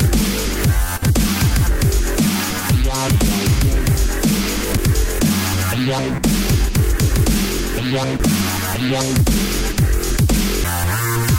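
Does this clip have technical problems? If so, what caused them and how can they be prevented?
Yes. CD skips at 4.77, 8.19 and 10.64 s: the laser jumps tracks, leaving a tick and a brief few-millisecond mute, and the sound resumes from another place. Unlike a plain dropout, it doesn't pick up where it stopped. Cleaning or replacing the disc and shielding the player from knocks prevents this.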